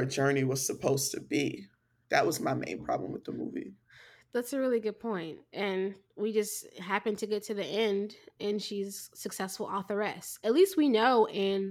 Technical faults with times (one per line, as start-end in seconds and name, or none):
none